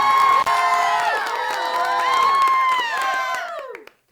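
Intermittent contact at 0.40–0.48 s in this everyday-sound recording: a loose connection opens for about 40 ms, cutting the sound to faint hiss with crackle at both edges.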